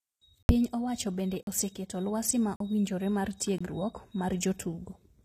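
HE-AAC compression runs through the whole speech clip. Nothing sounds above 14.9 kHz, and the treble is likely rebuilt by spectral band replication, copied upward from lower bands under a coarse envelope. This plainly audible damage leaves sibilants gritty and metallic, as fits a low bitrate near 24 kbps.

Blocks of digital silence cut the sound out, without fades, at 0.43 to 0.49 s (64 ms), at 1.43 to 1.47 s, between "owacho bende" and "oseketo lwasi ma owinjore", and at 2.56 to 2.60 s, after "bende oseketo lwasi ma" and before "owinjore mar". Both later gaps last about 43 ms, which fits 2048-sample blocks. A fourth gap follows "lwasi ma owinjore mar" at 3.58 to 3.61 s, about 21 ms, suggesting 1024 samples. Each is likely an output buffer left unfilled, heard as a short hole.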